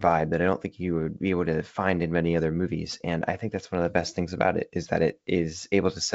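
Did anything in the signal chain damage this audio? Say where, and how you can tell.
No, the speech comes through G.722 wideband telephone coding at 64 kbit/s, with its bandwidth reaching to about 7 kHz and any coding trace no more than faint, and no stage in the chain leaves an audible mark.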